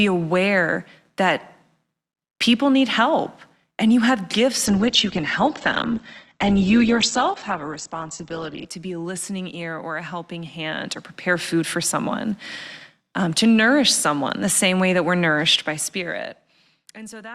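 Speech, and from 4.67 to 8.67 s, between "and you have gifts" and "to be a listening", it drops to an adaptive stream at a lower bitrate. Everything above 8.2 kHz is gone and codec artefacts rise, which fits a slip to a much lower Opus bitrate. It switches abruptly both ways, with no gap.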